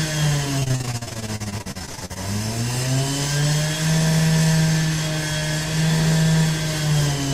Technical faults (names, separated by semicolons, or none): repeated packet loss (robotic sound)